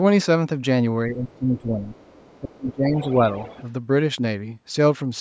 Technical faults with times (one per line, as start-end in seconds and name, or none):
1.08-1.86 speech suppressed in double talk
1.28-1.34 other side's voice leaking through
1.94-2.38 other side's voice leaking through
2.40-3.23 speech suppressed in double talk
2.68-3.63 other side's voice leaking through